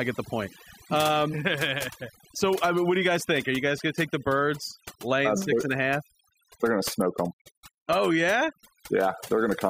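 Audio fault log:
Throughout: overdone noise removal. Between phrases the background collapses to near silence flecked with twinkling, chirpy specks. A noise reducer set far too hard is gating individual frequency bands whenever they sit close to its noise estimate, taking quieter speech detail with them.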